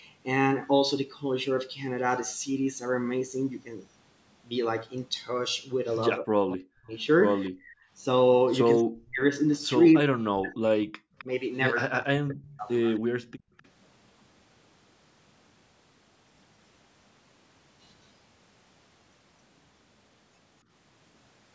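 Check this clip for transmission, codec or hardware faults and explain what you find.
The clip has three call-path faults, all tied to an echo canceller working against loudspeaker playback, heard through a band that stops at 8 kHz, consistent with wideband call microphone processing.

Speech suppressed in double talk, 6.24–7.79 s and 8.83–13.0 s: the speech dips and breaks into pieces, sinking by up to roughly 40 dB for about a second in the first stretch and about a second and a half in the second. This is likely an echo canceller unable to separate near and far talkers while both were active, turning everything down.

Echo leak, 7.45–7.50 s, 11.18–11.24 s and 12.47–13.68 s: a faint delayed copy of the speech trails the original by 262 ms, about 25 dB down in the first and last spans and about 20 dB down in the middle one. It comes through as brief scraps, then a longer stretch over a second. 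It points to loudspeaker pickup that the canceller failed to fully remove and that was sent back.

Background gated by the echo canceller, 13.0–13.57 s: the room sound drops out abruptly, falling by about 40 dB for roughly half a second, then returns. The canceller clamped the microphone hard while playback was active and released it once the echo subsided.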